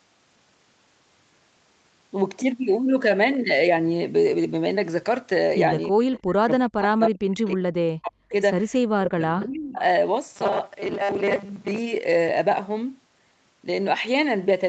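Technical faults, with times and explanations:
5.9–8.33 s, speech suppressed in double talk: the talker's level falls by roughly 40 dB in places, for about two seconds in total, as the other side talks over it. The echo canceller likely mistook the talker for loudspeaker echo and turned both down.
6.15–6.19 s, echo leak: a brief, faint scrap of delayed voice, roughly 25 dB under the speech and arriving about 0.32 s late, slips through. The far end's echo canceller likely failed to remove all of what its microphone picked up from the loudspeaker.
9.03–9.78 s, speech suppressed in double talk: a second dip of roughly 35 dB, about 0.7 s in all, while both sides speak at once. This is likely the echo canceller again ducking the talker along with the echo it was trying to remove.
10.36–11.78 s, robotic sound from repeated short buffers: the sound becomes a rigid, metallic 200 Hz buzz, with about half of it made of repeats. 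This is likely short buffers being replayed while real audio is skipped, and the buzz fits a 5 ms buffer.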